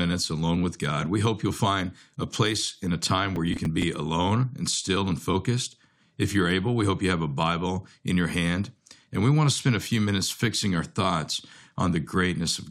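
From 3.36 to 3.83 s, between "place in a time" and "alone and still and", processor overload crackle tears through the speech. The processor missed several buffer deadlines, each around 10 ms, and repeated stale audio with hard edges. It sounds like gritty crackling.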